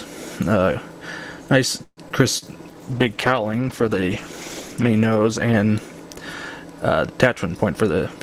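At 1.83 s the sound stalls: the last moment is stretched into a fading buzz that dies to a brief silence of about 40 ms before the audio picks up again at 2.00 s, exactly where it left off. This is a call audio freeze. The likely cause is packets held up in transit while the jitter buffer ran dry, so the receiver extended the final sound for 136 ms. Nothing is lost; a pause has simply been inserted.

Almost immediately afterwards, between 2.09 and 2.13 s, playback lurches forward. A sliver of roughly 70 ms drops out and the material on either side is butted together with only about 10 ms of bridging, so the flow jumps instead of pausing. This skip ahead happens when audio is discarded even though later packets are already queued. Here it also wipes out much of the delay the freeze had just added.

At 2.38 s there is a short smear, a wobble lasting until about 2.45 s. That is short concealed packet loss. 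About 40 ms of the stream never reached the decoder in time. The receiver filled the gap with 37 ms of synthesised continuation, carrying forward the preceding sound's character, and then cross-faded back into the real signal.

From 2.44 to 3.15 s the sound drags. It plays at about 90% speed, yet the pitch stays where it was, so sustained sounds are drawn out. This jitter buffer slow-down is the receiver rebuilding its reserve. It repeats individual pitch periods and slivers of quiet over and over, adding 80 ms in total across the stretch.

Overlapping that, from 2.71 s the timbre turns coarse and dull: the top end thins out and the texture becomes watery. It stays that way until 6.60 s. This is a call bitrate drop. The bandwidth estimate fell, and the encoder went from 48 kbps down to 13 kbps, where it remained for about 2.3 s. At that rate the codec quantises heavily and trims the high frequencies, which accounts for the muffled, rough character until the rate climbs back.

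Finally, from 7.55 to 8.15 s the audio hurries. It runs at about 113% speed with the pitch unchanged, so it sounds rushed. This jitter buffer speed-up means the buffer was holding more than its target, typically after delayed packets arrive in a burst. To bring latency back down, the receiver snipped out short pieces one or a few pitch periods long, roughly 100 ms of material in all.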